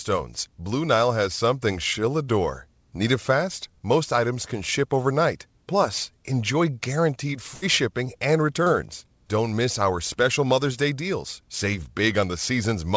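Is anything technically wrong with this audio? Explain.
Yes, there are two packet-loss faults, heard through a call path whose bandwidth, with nothing above 8 kHz, fits the G.722 codec.

Burst of packet loss, 7.54 to 7.64 s, after "enjoy guaranteed": about 80 ms never arrived. The receiver stretched the last sound and faded it, so it sounds like that sound held and dimming away. Then "shipping and" resumes abruptly with audio missing. A spectrogram shows the last sound held flat and fading, ending in a hard edge.

Short concealed packet loss, 8.64 to 8.68 s, after "shipping and": roughly 20 ms was lost and filled by continuing the preceding sound, then blended back. It sounds like a brief smear or wobble. The waveform shows a short, overly regular stretch where natural detail is replaced.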